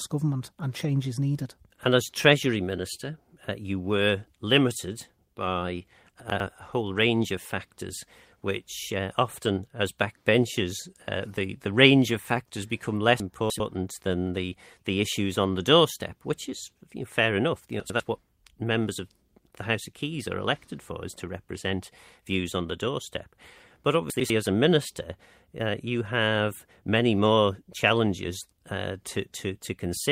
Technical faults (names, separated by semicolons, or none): chunks out of order